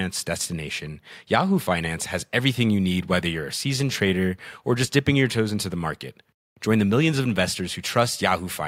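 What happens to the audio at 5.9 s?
Nothing goes wrong at 5.9 s: the speech there plays through intact, with no dropout, click, distortion or other fault at that moment.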